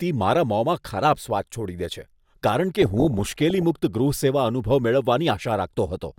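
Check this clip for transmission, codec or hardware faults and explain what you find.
There's one fault here, DAB burbling, running from 2.82 to 3.63 s in the speech. Weak reception let bit errors slip past the error correction into the MP2 audio data, so corrupted samples put short blips of noise in individual sub-bands and corrupted scale factors kick sub-bands up or down in level for up to a frame. That gives a burbling texture of noise blips and sub-band level jumps over the speech, and the density points to a few dozen hit frames at a bit error rate somewhere under 1 percent.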